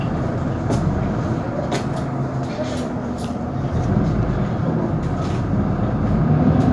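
Nothing's wrong here: it's a short recording of everyday sounds, and there's no technical fault to point to anywhere in it.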